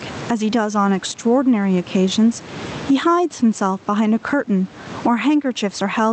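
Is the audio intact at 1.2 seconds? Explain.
No. Gain pumping runs through the whole clip, including 1.2 s. The gain swells in the gaps and ducks by around 25 dB under loud sounds, likely from excessive gain with a fast limiter. Unlike gating, it never falls silent.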